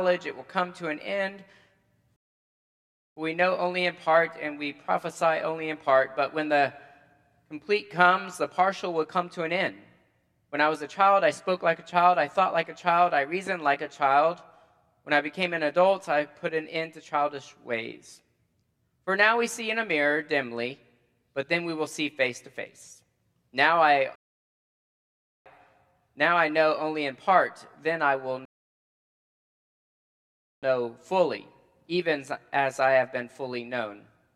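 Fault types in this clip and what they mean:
Rebuffering stall at 2.16–3.17 s, 24.16–25.46 s and 28.45–30.63 s: the player used up its downloaded audio and had to wait for more data, so playback drops to silence and then picks up exactly where it stopped. No sound goes missing. Each gap only adds time: about 1.0 s, 1.3 s and 2.2 s. The later two pauses come close together, and the final one is the longest.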